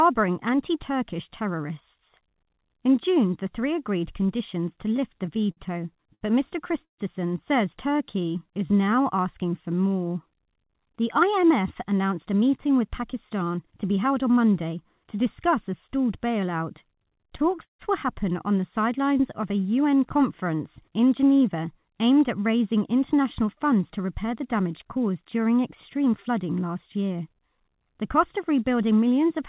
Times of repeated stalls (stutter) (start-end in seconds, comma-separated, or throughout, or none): 4.88-6.23, 16.92-17.81